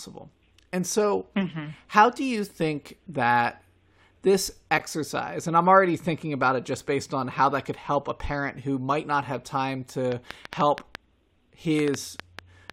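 From 10.12 s to 12.71 s a train of clicks ticks over the speech: around fifteen sharp, similar pops at an uneven pace of about 4.7 per second, peaking roughly 15 dB above the speech. Likely interference from nearby equipment or a faulty connection or power supply.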